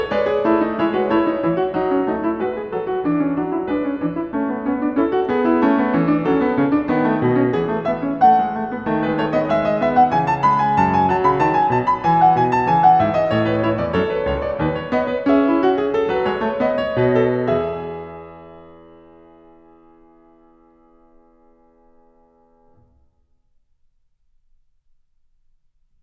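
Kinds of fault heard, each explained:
No technical fault can be heard anywhere in this music recording. There is nothing of that kind to list or explain here.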